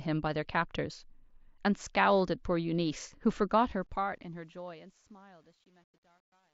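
From 3.49 s, as the speech fades out toward the end, truncation distortion on a fade sets in. The gain stage drops low bits without dither, which fits a 10-bit stage. The fading tail turns gritty and steppy, worst from about 4.51 s to 6.54 s.

At 3.71 s, early in that fade, there is concealed Bluetooth headset packet loss. A gap of about 7.5 ms, consistent with a single lost packet, was patched by repeating a matching slice of the preceding waveform. It is almost inaudible within the mSBC headset link's wideband sound.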